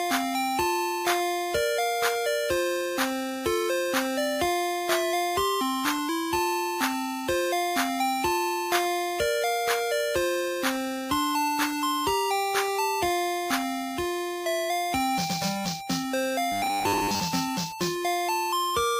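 From 16.52 to 17.2 s the sound turns to a rigid metallic 100 Hz buzz, robotic sound from repeated short buffers, likely 10 ms chunks looped; spectrograms show evenly spaced harmonic stripes.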